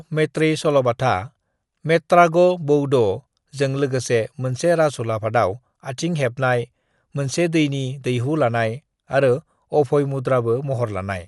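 Throughout the speech the sound is dull and noticeably coded, with nothing above 11.4 kHz and a rough, fluttering noise around tonal parts. This is likely Dolby Digital compression at a low rate, consistent with about 64 kbps, narrowing the band and filling unfunded frequency lines with noise.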